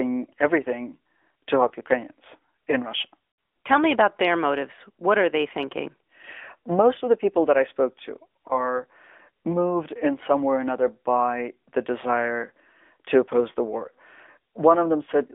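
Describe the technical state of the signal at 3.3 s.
At 3.30 s the signal shows lost AMR speech frames, from 3.30 to 3.38 s. The radio link dropped an 80 ms stretch, which fits four consecutive 20 ms frames. The decoder filled the gap by repeating the last good pitch and vocal tract settings at falling gain, so the sound smears into a short, droning warble before recovering. On a waveform this appears as a dip in amplitude. On a spectrogram the harmonics flatten and stretch into repeated bands that fade across the gap.

Underneath, the whole passage carries the AMR narrowband mobile codec at plainly audible damage, with buzzy, synthetic texture consistent with a mode around 10.2 kbps. The line band runs from about 250 Hz to 3.5 kHz, so the low end is thin and nothing above 3.5 kHz survives. A spectrogram would show a hard ceiling near 3.5 kHz, an empty region below 250 Hz, and coarse, smeared formant structure from the vocal tract model resynthesising the sound.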